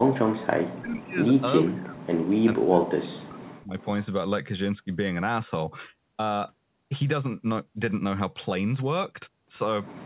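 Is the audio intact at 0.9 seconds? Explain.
No. From 0 to 1.22 s the speech is suppressed in double talk, sinking by roughly 40 dB in broken stretches, about a second in total. The likely cause is an echo canceller confusing the talker with far-end echo. The waveform shows collapsed, gappy envelopes; the spectrogram shows faded bands.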